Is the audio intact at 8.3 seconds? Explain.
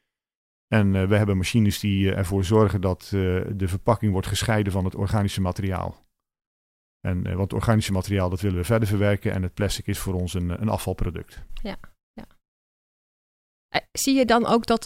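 Yes, the speech at 8.3 seconds is intact, with no dropout, click, distortion or other fault at that moment.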